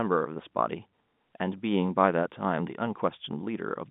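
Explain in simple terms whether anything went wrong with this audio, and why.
Nothing went wrong in this speech recording. It has passed through ordinary G.711 telephone coding, so it carries the narrow, phone-line sound of that system, roughly 150 Hz to 3.6 kHz, as a normal call would.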